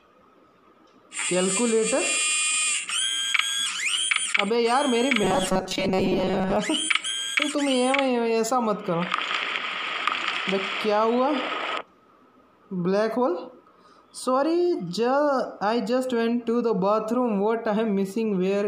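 From 5.23 to 6.56 s the sound turns into a rigid metallic buzz near 188 Hz: robotic sound, likely from repeating a roughly 5 ms buffer while most real audio was skipped.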